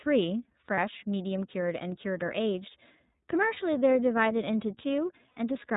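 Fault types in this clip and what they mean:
iLBC codec: a narrowband VoIP codec coding each 30 ms frame independently; the speech sounds slightly rough and synthetic, with nothing above 4 kHz.
Lost iLBC frames: dropped packets get patched with a repeated pitch cycle plus noise, heard as brief buzzy held vowels near 0.74, 3.53 and 5.31 s, recovering quickly.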